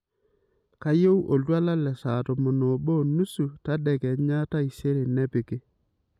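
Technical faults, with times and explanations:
No technical faults can be heard in this speech recording.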